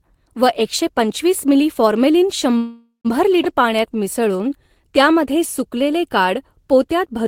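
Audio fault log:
2.57–3.07 s, call audio freeze: The sound stalls and the last moment before the break carries on as a fading buzzy smear for about a third of a second, then drops to near silence for about 120 ms before the audio picks up exactly where it left off. This is likely a jitter buffer running dry while packets were held up in transit. The receiver stretched out what it last had, so roughly 0.47 s of extra time was inserted and nothing was lost.
3.43–3.46 s, skip ahead: Shortly after the freeze, the audio lurches forward with almost no gap. Only about 9 ms of fill bridges the join, and around a tenth of a second of material is simply gone, so the sounds on either side butt up against each other abruptly. A short stretch was discarded while later audio was already queued, which fits a jitter buffer trimming back the backlog that built up during the stall.
3.56–4.69 s, jitter buffer slow-down: For just over a second the audio drags at about 91% of normal speed while the pitch stays the same. 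Sounds are drawn out as single pitch periods are repeated back to back. Here the receiver was rebuilding its reserve, or settling on a longer target delay after the skip, by duplicating tiny slices of the waveform. That padding adds about 108 ms in total across the stretch.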